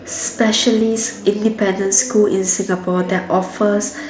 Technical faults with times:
0.00-4.10 USB whine
0.80 concealed Bluetooth headset packet loss
1.83 concealed Bluetooth headset packet loss

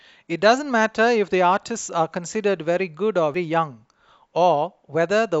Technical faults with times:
3.34 damaged data in a compressed stream

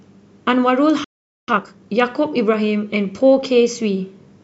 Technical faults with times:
1.04-1.48 playback stall
1.48-1.90 time-compressed catch-up

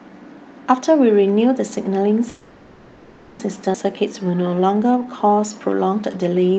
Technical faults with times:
2.29-3.41 call audio freeze
3.73-3.76 skip ahead
3.93-6.58 jitter buffer slow-down

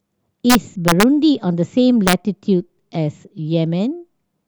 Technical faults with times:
0.50-1.03 integer overflow
2.07-2.13 integer overflow

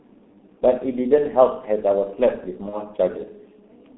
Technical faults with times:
0.00-3.98 G.723.1 codec
2.69-2.78 VoIP packet loss concealed by the speech codec

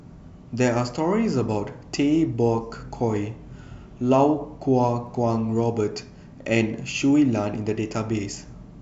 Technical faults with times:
5.07 dropped samples

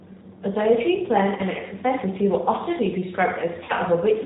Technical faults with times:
0.00-4.25 G.729 codec
1.37-1.42 VoIP packet loss concealed by the speech codec
3.64-3.73 VoIP packet loss concealed by the speech codec

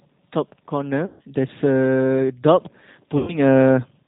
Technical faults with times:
0.00-4.07 G.729 codec
1.06-1.21 VoIP packet loss concealed by the speech codec
3.18-3.36 VoIP packet loss concealed by the speech codec

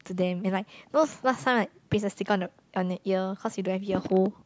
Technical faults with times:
none

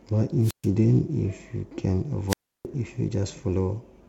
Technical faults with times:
0.41-0.68 wireless microphone squelch dropout
2.28-2.66 wireless microphone squelch dropout

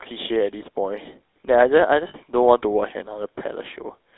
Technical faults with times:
0.00-4.17 GSM full-rate codec
2.08-2.16 lost GSM frames

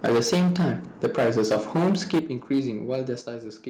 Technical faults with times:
0.04-0.73 microphone overload
0.06 microphone volume stepped down
1.03-2.19 microphone overload
2.19 microphone volume stepped down
2.51-2.59 microphone overload
2.91-3.12 microphone overload
3.21 microphone volume stepped down

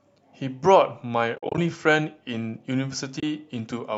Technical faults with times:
1.36-1.58 AAC frame loss with muting
3.19-3.23 AAC frame loss with muting

